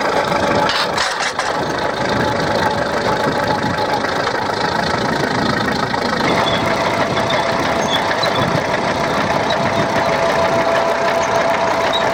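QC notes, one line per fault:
Throughout: filter restarted on every block. A steady buzz at 50 Hz runs under the sound. The filter discards its internal state at each block boundary and restarts from zero, so every block opens with a small transient before the filter settles. Those transients recur every 20 ms, which points to fixed 20 ms processing blocks. The buzz grows louder and quieter with the signal, because each transient scales with the level entering the filter.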